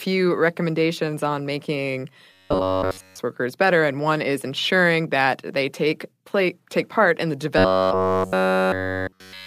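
Robotic sound from repeated short buffers hits this speech clip from 2.32 to 3.19 s, between "recommendations on making" and "workers better and one", and from 7.58 s to the end after "take part in the". Each stretch becomes a rigid metallic buzz at 93.8 Hz. That likely comes from a roughly 11 ms block being replayed almost continuously while the incoming audio was skipped.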